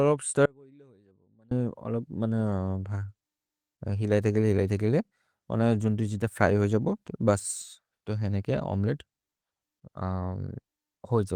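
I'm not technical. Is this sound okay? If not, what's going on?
No. Early in the clip the speech signal was likely cut off somewhere along the way for about a second, while the rest of the recording chain kept running. This is an audio dropout to a faint residue: from 0.46 s to 1.51 s the voice abruptly vanishes, leaving only a very faint trace of sound far below normal loudness, then snaps back. It sounds like a sudden hole in the speech, not a natural pause or fade.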